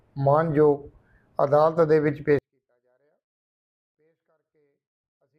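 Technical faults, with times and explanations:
2.39 s to the end, 24-bit alignment error (too quiet): the sound suddenly drops by about 48 dB and becomes nearly inaudible, yet stays clean, with no distortion, hiss or change in tone. The samples are 24-bit values sitting in the low bytes of 32-bit words but are read as full 32-bit integers, so every value is scaled down by 256 (eight bits). A fade or volume ramp would slide down gradually instead of dropping instantly, and a misalignment the other way would clip harshly.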